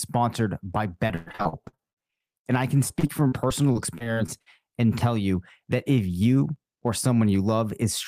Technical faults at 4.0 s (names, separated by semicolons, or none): jitter buffer slow-down; repeated packet loss (robotic sound)